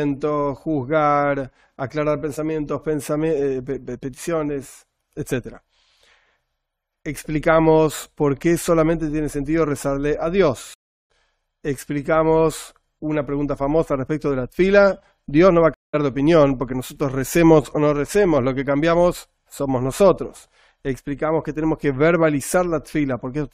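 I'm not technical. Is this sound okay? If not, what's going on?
No. Twice the stream reconnected: the connection dropped and the player restarted, so the sound cuts out (10.74 to 11.10 s, then 15.74 to 15.95 s) and resumes roughly a fifth of a second further on.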